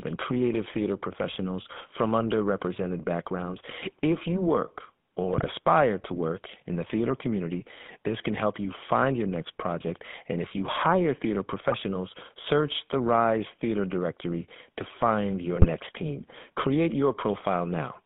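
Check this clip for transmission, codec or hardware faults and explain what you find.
Two faults are on this speech clip: a GSM full-rate codec coding the whole thing, plus three short bursts of GSM bit errors on top.

The GSM full-rate codec runs the entire 18 seconds. It models the vocal tract and feeds it a sparse, regularly spaced pulse excitation, so the sound comes out buzzy and gravelly. The band sits around 150 Hz to 3.5 kHz, and the damage is plainly audible, which fits the old 13 kbps full-rate coder.

The GSM bit errors hit at 5.32 to 5.46 s, 11.68 to 11.75 s and 15.56 to 15.67 s. Corrupted filter, pitch or gain values reach the decoder, so a few frames at a time come out with a bent spectrum or level jumps. You hear squawks, pops and a gargly break. The middle one has the highest error rate, roughly 3 percent against nearer 2 percent for the other two.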